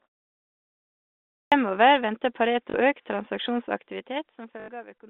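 Clipped start after a pause, at 1.45 s: the clip opens with about 1.45 s of silence, and the output device appears to have gone idle during it. When the speech begins, roughly 68 ms of it is lost while the device wakes up and locks on again. The first sounds of the speech are missing, so the voice starts abruptly out of silence, already partway into its onset.

Packet loss with last packet repeated, at 2.70 s and 4.60 s: the gaps last 40 ms and 80 ms, which fits two and four 20 ms packets. In each gap the receiver kept replaying the last packet it had. Those repeats seldom line up with the pitch of the voice. The result is a brief robotic stutter with a buzz near 50 Hz.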